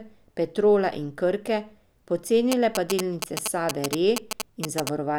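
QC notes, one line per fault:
2.52–4.89 s, GSM signalling bursts: a nearby 2G phone sending short groups of radio bursts, as it does while signalling, is being picked up and rectified by the audio circuitry, so the RF envelope turns into audible interference. Over this stretch it comes through as a galloping dit-dit-dit of short buzzes built on a repetition rate of about 217 Hz, roughly as loud as the speech.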